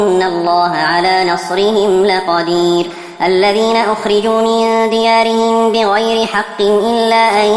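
From start to end the clip has a wrong sample rate fault. Everything runs 1.38 times too fast and sits about 5.5 semitones high, which fits 16 kHz material played at 22 kHz. Unlike a pitch shift or time-stretch, speed and pitch move together.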